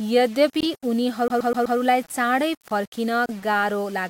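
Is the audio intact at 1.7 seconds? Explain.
No. At 1.7 s the sound is caught in a CD stuck on one turn. From 1.28 to 1.78 s the same slice of about 0.13 s plays four times over. A brief mute falls at each jump. This is what happens when a scratch knocks the laser back one track at the same point on every rotation. The result is a quick, evenly spaced stutter instead of forward progress.

The moment also carries a grainy, gritty texture that follows the sound and roughens quieter parts. The likely cause is low bit depth without dither, at around 6 bits with rounding. Each sample snaps to one of very few levels. The error sits only about 25 dB below the signal and moves with it, so it is heard as distortion rather than steady hiss.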